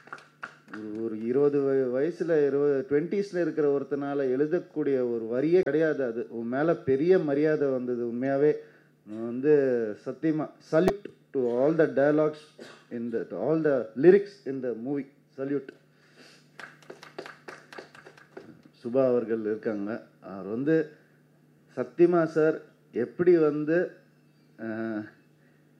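Three brief glitches break into the audio, at 5.63 to 5.68 s, 8.24 to 8.27 s and 10.86 to 10.91 s, each lasting only a few tens of milliseconds and spaced about 2.6 s apart. These are damaged data in a compressed stream: corrupted bytes at those points make the decoder misread the affected frames and lose sync until it finds the next valid frame header, so garbled output replaces the intended sound.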